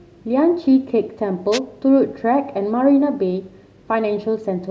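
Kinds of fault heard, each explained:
Wireless microphone noise hit: the analogue FM radio link fades briefly as reflections cancel, so receiver noise surges into the speech as a short static burst from 1.52 to 1.59 s. A spectrogram shows a broadband vertical smear; the waveform, a brief ragged noise patch.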